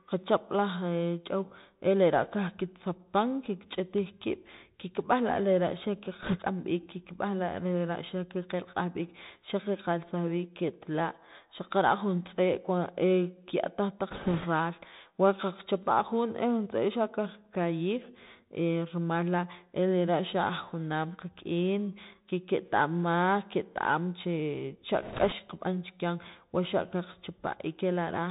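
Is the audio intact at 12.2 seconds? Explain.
No. At 12.2 s, as throughout the speech, the Bluetooth CVSD headset codec cuts everything above 4 kHz, and its adaptive one-bit steps leave scratchy sibilants and granular hiss.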